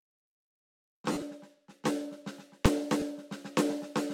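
At 1.12 to 1.22 s the music turns briefly into a grainy, noisy smear, with pitched content losing its focus. The longest unbroken stretch is around 50 ms, and about 60 ms is missing in total, spread over 100 ms. These are lost LE Audio frames, which fits six 10 ms frames. For each missing frame, the LC3 decoder fills the gap by repeating the last good spectrum with randomised signs. That keeps the energy but destroys the tonal structure.

At 2.66 s there is a single hard bang, much louder than the music around it. This is invalid numbers at full scale. A calculation produced infinite or undefined values, and these were clamped to the maximum sample value across one short block of about 2.9 ms, which suggests a 128-sample processing block. Because the block is so short, the jump to full scale and back merges into one pop.

At 3.00 to 3.02 s a shorter smear of about 20 ms appears, again from lost LE Audio frames, which fits two missing frames. 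The gap is brief, so the decoder's substitute is still at full strength and has not started fading. It comes across as a quick burst of noisy blur in the music.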